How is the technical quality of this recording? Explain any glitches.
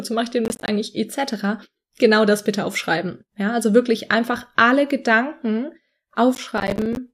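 The recording has two bursts of processor overload crackle, at 0.45 to 0.68 s just after "mache ich den" and at 6.35 to 6.97 s. Audio buffers of around 10 ms missed their deadlines repeatedly, leaving hard-edged silent gaps heard as gritty tearing.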